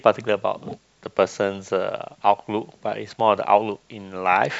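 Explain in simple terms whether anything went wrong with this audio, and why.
Nothing went wrong here: the recorded speech comes through intact, with no gaps, glitches or other technical faults anywhere in the signal.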